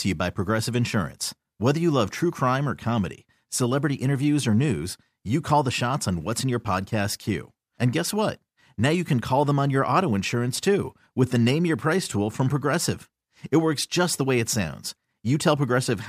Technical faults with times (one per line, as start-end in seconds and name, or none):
none